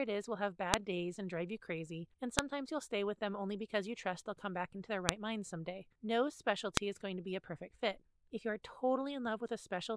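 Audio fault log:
0.74, 2.39, 5.09 and 6.77 s: file header played as audio. Each joined speech piece begins with its leftover header bytes decoded as samples, giving a sharp, loud snap regardless of the signal. On a waveform each is a lone tall spike; on a spectrogram, a thin vertical broadband line.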